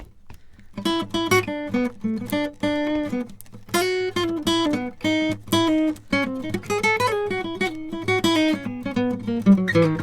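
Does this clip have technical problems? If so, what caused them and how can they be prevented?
No technical problems are audible.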